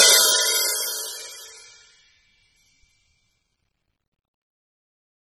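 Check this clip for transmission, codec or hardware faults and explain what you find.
One codec fault runs through the whole music clip. AAC compression, throughout: the spectrum stops dead at about 15.8 kHz, and the sound has a dull, smeared quality with warbling on sustained tones. This fits a low-bitrate AAC-LC encode around 24 kbps, which likely starved the quantiser and forced the lowered cut-off and coarse high bands.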